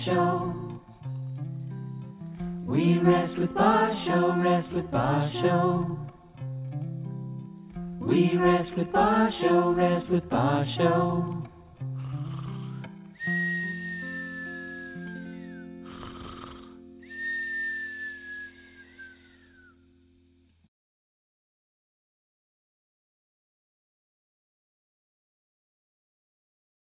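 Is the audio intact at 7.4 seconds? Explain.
Yes, at 7.4 seconds the audio is intact, with no dropout, click, distortion or other fault at that point.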